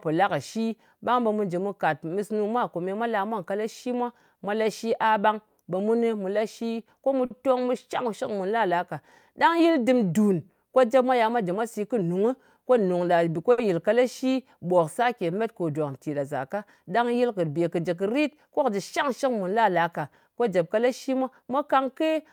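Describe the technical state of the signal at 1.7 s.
At 1.7 s the signal is intact, with no audible technical fault at that moment.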